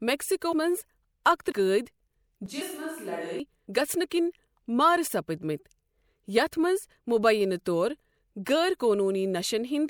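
Compressed frames skipped at 0.51 s: whole compressed frames never reach the output, so the audio jumps forward by roughly ten frames, about 300 ms of sound gone. The jump size fits a frame length of 26.1 ms. Because adjacent frames overlap, the join is a short smeared blip, not a hard click. The same fault returns at 1.51 s, dropping about seven frames (roughly 150 ms).

Switch to a distant microphone from 2.46 s to 3.40 s, just before "گَژھنہٕ کِنہِ": the sound suddenly turns roomy and hollow, thinner in the bass and about 5 dB quieter, with background noise sitting about 35 dB below the speech. The likely cause is that the close microphone dropped out and a farther pickup filled in. The return to the close sound at 3.40 s is just as abrupt. Inside this stretch, at 2.60 s, compressed frames are skipped again, jumping over about seven frames, roughly 200 ms.

Compressed frames skipped once more at 3.67 s, just before "گَژھنہٕ کِنہِ": about seven frames, roughly 200 ms, are lost, leaving the same brief smeared blip at the join.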